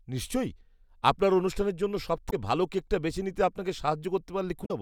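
At 2.27 to 2.33 s, just after "নিশ্চয়ই আপনার অনুষ্ঠানের জন্য", the speech breaks into a short glitch. Damaged data in a compressed stream makes the decoder misread frames and lose sync. A second blip follows at 4.62 to 4.71 s.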